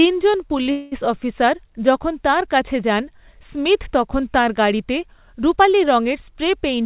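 At 0.63 s a packet arrived late and the jitter buffer briefly ran dry, producing a short stall from a late packet. To cover the gap, the receiver stretched the last bit of sound for about 24 ms until the data caught up, then carried on from the same point. Nothing is lost, but the speech hangs for an instant with a faint buzzy smear before moving on at 0.67 s.

From 0.71 to 0.94 s comes a longer call audio freeze, likely caused by packets held up in transit, which left the jitter buffer empty again. For about 205 ms the receiver filled the hole by extending the last sound as a fading buzz that never quite drops to silence. When the audio resumes it picks up where it stopped, so the speech is pushed later by that amount rather than cut. Throughout the clip the narrowband call path passes nothing above 4 kHz, which fits a G.711 mu-law link.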